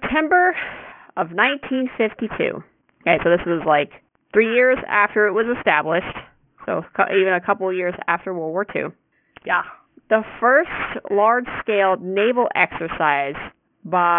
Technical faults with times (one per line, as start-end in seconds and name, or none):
0.00-14.18 aliasing